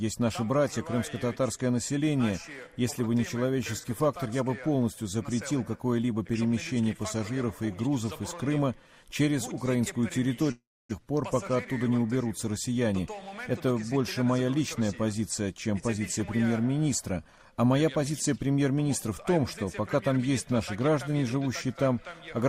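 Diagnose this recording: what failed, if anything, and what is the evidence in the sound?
The network stage likely suffered a long network dropout, with nothing arriving between 10.51 and 10.93 s. The receiver stretched the last sound into a fading buzz that gives way to about 280 ms of silence, and 400 ms of audio is missing when sound resumes.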